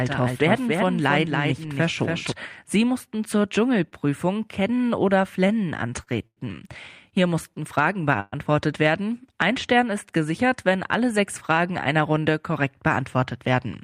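From the start until 2.32 s, a doubled audio track is heard. A full-band second copy trails roughly a third of a second behind, about 5 dB quieter. It has no decay or room colour. It stops abruptly. A slower second capture path is the likely cause.

Short stalls from late packets follow at 3.89, 5.47, 6.03 and 6.27 s. Each time, a packet arrived late and the receiver held the last sound until it came. The holds last 20, 15, 39 and 98 ms. Nothing is lost. Sounds just drag briefly, with a faint buzz or dip.

From 8.20 to 8.34 s there is a call audio freeze. The last sound is carried on as a fading buzz or hiss for 120 ms, ending in about 10 ms of silence. Packets likely stalled in transit and emptied the jitter buffer. The audio then resumes where it stopped.

From 12.21 to 13.66 s comes a jitter buffer speed-up. The receiver trimmed small pitch-period slices to shed excess buffered delay, roughly a tenth of a second in all. 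The speech runs at about 106% speed. Pitch is unchanged, but it sounds hurried.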